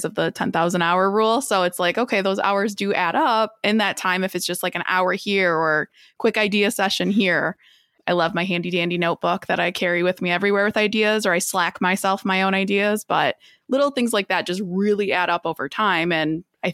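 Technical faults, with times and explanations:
Nothing stood out as a technical problem on listening to this speech recording.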